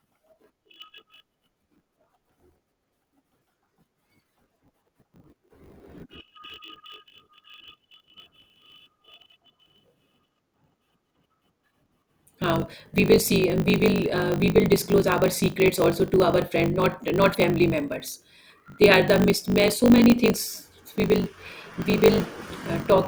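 From the start and throughout, the speech has a block size mismatch with truncation. Each block written is longer than what the next stage reads, so its tail is dropped. This leaves a steady 50 Hz buzz at the block rate, consistent with 1024-sample blocks, and speech running 1.16 times fast at roughly normal pitch.

From 17.31 to 17.35 s, damaged data in the compressed stream produces a brief glitch. The decoder misreads the corrupted frames, loses sync and resumes at the next valid frame header.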